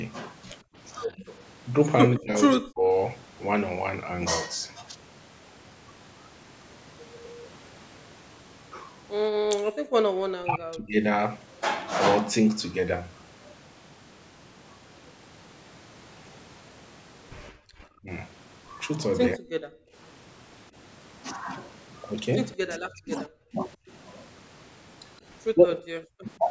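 At 0.63–0.75 s the room background is gated by the echo canceller: while the loudspeaker plays, the ambience drops by about 32 dB and then returns. Only the background vanishes, not the talker.

From 1.07 to 2.85 s the talker's speech is turned down, cut by roughly 35 dB, likely speech suppressed in double talk as the canceller mistakes the local voice for echo.

Gating returns at 9.37–9.94 s, about 40 dB deep, followed by speech suppression at 10.3–11.02 s with cuts near 40 dB. Both recur together between 17.51 and 19.94 s (gating about 32 dB), with the speech dips falling at 17.98–19.43 s. The speech is suppressed once more from 22.55 to 26.42 s.

Throughout, the call microphone processing passes nothing above 8 kHz.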